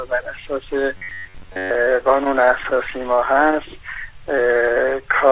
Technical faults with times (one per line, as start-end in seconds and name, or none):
0.95-1.75 robotic sound from repeated short buffers
2.24-3.97 repeated stalls (stutter)
3.82-5.31 jitter buffer slow-down